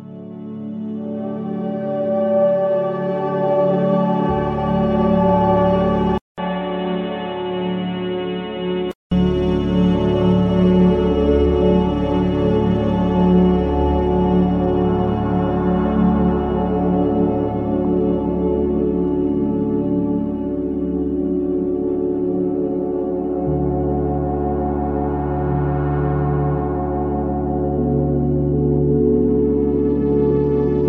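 At 6.18 s a 200 ms gap opens, and the sound turns dull and boxy until 9.11 s, with nothing above 4.1 kHz, about 5 dB quieter, with a faint new noise floor. This points to an input switched to a poorer device, likely a narrower-band headset profile.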